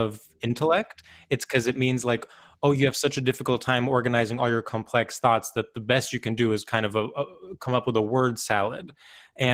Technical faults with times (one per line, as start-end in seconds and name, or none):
0.00-9.54 Opus voice compression